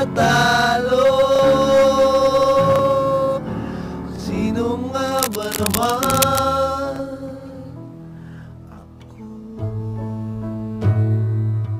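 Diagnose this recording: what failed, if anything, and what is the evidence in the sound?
The analogue wiring stage is where I'd point. From 5.07 to 6.4 s there's a burst of dense, uneven scratching sitting only a little below the sound itself. That's cable scratch noise, likely from a worn lead or connector being moved while its contact resistance jumped around.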